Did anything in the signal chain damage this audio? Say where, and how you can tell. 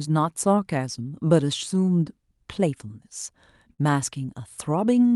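Yes. At the receive buffer stage there is clock drift between sender and receiver: the sender runs roughly 3% slow, so the jitter buffer keeps draining, leaving irregular tiny splices in the waveform.

Repeated timing corrections run from 0.08 to 5.1 s, playing at 98% speed and adding about a tenth of a second, visible as unevenly spaced seams on the spectrogram.

A short stall from a late packet at 3.73–3.80 s stretches the preceding sound by 50 ms, shown as a smeared, frozen spectrogram column below the Opus path's 12 kHz ceiling.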